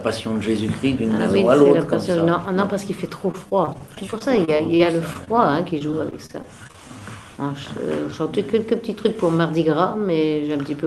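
Repeated packet loss (robotic sound) runs from 3.31 to 5.29 s: fourteen short gaps, the longest 24 ms, are patched by stretching the preceding sound, leaving about 13% of the stretch concealed and a choppy texture with pieces missing. A second burst from 5.79 to 6.76 s brings nine more gaps up to 30 ms, with about 17% concealed. Overlapping its end, a jitter buffer slow-down from 6.46 to 7.01 s repeats short pitch-period slices to rebuild the reserve, adding 50 ms so the audio plays at 92% speed, drawn out but unchanged in pitch. Throughout, the Opus call path limits the top end to about 12 kHz.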